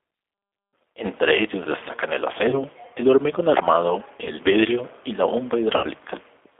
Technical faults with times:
0.00-6.59 G.729 codec
2.50-2.63 VoIP packet loss concealed by the speech codec
4.24-4.31 VoIP packet loss concealed by the speech codec
5.77-5.86 VoIP packet loss concealed by the speech codec

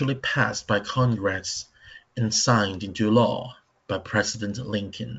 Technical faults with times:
none

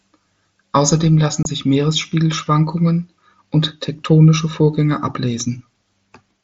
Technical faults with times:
1.43-1.45 unconcealed Bluetooth headset packet loss

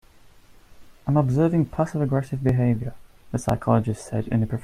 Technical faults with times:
2.49-4.49 periodic USB or driver dropouts

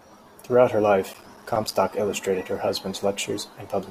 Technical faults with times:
1.14-1.75 processor overload crackle

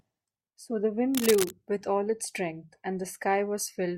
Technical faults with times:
1.14-1.52 cable scratch noise

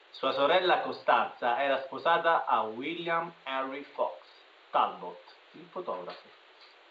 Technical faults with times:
none

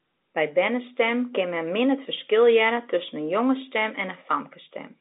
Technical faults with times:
none

